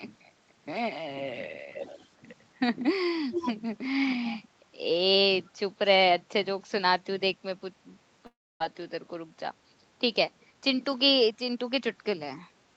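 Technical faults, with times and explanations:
1.73 to 2.07 s, 3.31 to 3.52 s and 5.46 to 5.51 s, echo leak: a copy of the speech trails about 295 ms behind, loud in the second, barely there in the third, likely from a far-end speakerphone's canceller.
8.26 to 8.61 s, long network dropout: the sound smears into a fading buzz, then goes quiet, and resumes with roughly 200 ms of speech lost, likely from packets not arriving.
10.54 to 11.81 s, jitter buffer speed-up: the speech runs about 8% fast at normal pitch as small chunks are trimmed to drain excess buffered audio, around a tenth of a second total.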